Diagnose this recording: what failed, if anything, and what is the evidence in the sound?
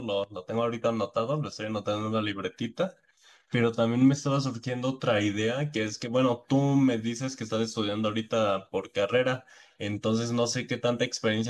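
Nothing in this speech recording points to a failure at any stage, so there's no diagnosis to make.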